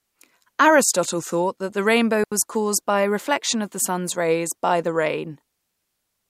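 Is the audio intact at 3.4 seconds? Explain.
Yes, at 3.4 seconds the speech plays through cleanly, with no dropout, click, distortion or other fault at that point.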